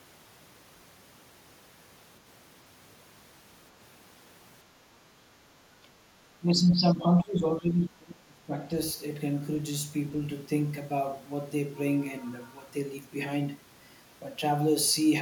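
At 5.83 to 5.9 s the speech briefly sinks by around 10 dB, then from 6.39 to 8.55 s it drops much harder, up to roughly 25 dB. That's likely speech suppressed in double talk, with the echo canceller ducking the near talker along with the echo.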